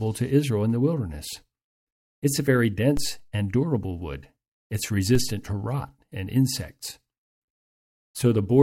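At 2.97 s and again at 5.15 s the speech carries a DC step, a sudden shift of the waveform's zero line by about -18 dBFS. Each jump registers as a brief low thump while the speech itself continues unaffected. The offset does not hold. It bleeds away as a slow decay, consistent with a high-pass corner around 2 Hz, so the baseline settles back toward zero over the following fraction of a second.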